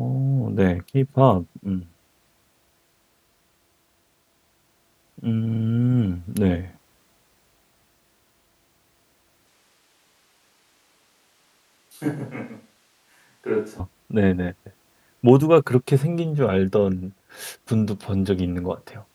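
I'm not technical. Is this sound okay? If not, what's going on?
No. From about 9.47 to 13.80 seconds the speech suddenly sounds hollow and roomy, as if the speaker stepped across the room. It gets noticeably quieter and thinner, with less bass and more background noise, then snaps back to normal just as abruptly. This is a switch to a distant microphone: the close microphone's signal likely dropped out for those seconds, so what you hear comes from a mic much farther away, picking up the room along with the speaker.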